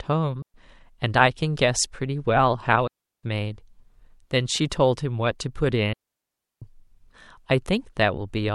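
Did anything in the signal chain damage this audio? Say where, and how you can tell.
Yes. The digital wireless link caused digital wireless dropouts at 0.42 s for 120 ms, at 2.87 s for 360 ms and at 5.93 s for 690 ms. Each is a clean hole of near silence with no noise burst around it. The receiver lost too much data and muted.

The codec adds pre-echo at 4.70 s and 5.39 s. A short hiss leads each attack by 16 ms and 10 ms. It sits about 16 dB and about 14 dB above the quiet before it. The attacks sound smeared. This fits a 26 ms transform block that never switched to short blocks.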